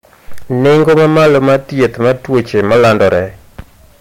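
Hard clipping runs throughout the speech: the signal is driven about 13 dB past what the stage can pass, flattening roughly a sixth of samples into harsh fuzz.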